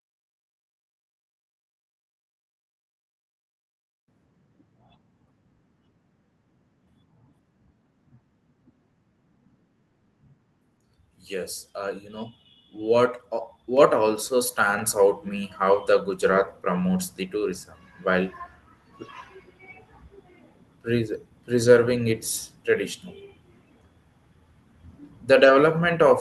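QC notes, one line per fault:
13.77 s and 14.79 s: microphone volume stepped up twice, first by about 5 dB, then about 4 dB. The input gain was raised in single jumps, so speech and background noise get louder together at each step, with no fade between levels.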